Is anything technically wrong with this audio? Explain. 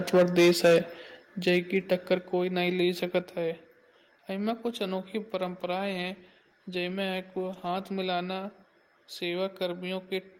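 Yes, this speech clip has three kinds of fault.

Microphone overload, 0.13 to 0.79 s and 1.47 to 2.14 s: the input level is likely set too high, so peaks hit the converter's ceiling and their tops are flattened. The first stretch is about 9 dB over, with a large share of the waveform cut, and sounds harsh and crackly. The second is about 3 dB over, with only occasional tops cut.

Microphone volume stepped down at 0.17, 1.17, 2.19 and 3.21 s (the last right after "नहीं ले"): the input volume was likely lowered in single steps in response to the loud peaks. Voice and background drop abruptly by about 2, 6, 3 and 3 dB.

Call bitrate drop, 5.43 to 7.97 s, beginning just after "वहां में कुछ अनोखे": the encoder's bit budget falls from 32 to 16 kbps for about 2.5 s. The coarser coding makes the speech sound rough until the rate recovers.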